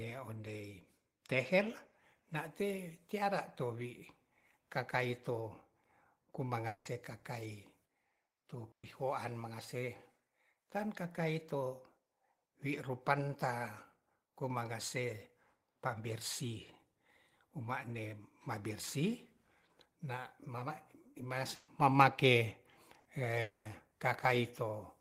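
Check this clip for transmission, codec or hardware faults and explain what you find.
The speech has five transmission gaps of two kinds, all in the network path.

Long network dropout, 6.67 to 6.88 s and 23.41 to 23.68 s. Audio stopped arriving, and the receiver covered the hole by continuing the last sound. About 180 ms of speech is lost in the first gap and about 240 ms in the second. Each gap is filled throughout by a smeared fill of the last sound that never reaches silence, so the lost stretch is likely a sustained dropout rather than scattered packets.

Burst of packet loss, 8.71 to 8.86 s, 21.55 to 21.70 s and 22.99 to 23.08 s. A short run of packets went missing, and concealment extended the preceding sound. About 120 ms is lost in each of the first two and about 60 ms in the third. At 8.71 s the held sound quickly fades to silence for most of the gap. At 21.55 s the fill continues without going quiet. 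Each time, the speech resumes further along, with a small piece skipped.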